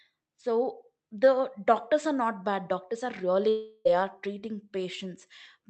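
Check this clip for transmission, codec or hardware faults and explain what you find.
One transmission fault is audible, a long network dropout from 3.49 s to 3.87 s, between "are really" and "are treating". For about 0.36 s no audio was received. The receiver's concealment stretched the last sound into a fading buzz that fills almost the whole gap, with no stretch of true silence. The speech then resumes with that portion gone. The sound points to lost packets as the likely cause. Throughout the clip, the call codec's upper limit is heard as a high-frequency cutoff near 8 kHz.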